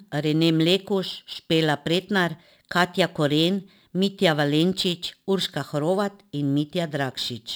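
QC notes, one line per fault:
Throughout, crude rate conversion: samples are dropped to reach the lower rate, with no filtering, which fits a 48 kHz to 44.1 kHz change. The error sits roughly 25 dB below the speech as an inharmonic, gritty fizz that tracks loud and high-frequency sounds.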